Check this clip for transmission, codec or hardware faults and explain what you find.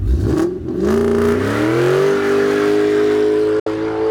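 There is one transmission fault: a digital broadcast dropout from 3.60 to 3.67 s. The receiver stopped getting usable frames and muted. The sound fades out over about 3 ms and leaves a hole of about 64 ms, which fits two lost frames. That stretch of audio is gone, not masked.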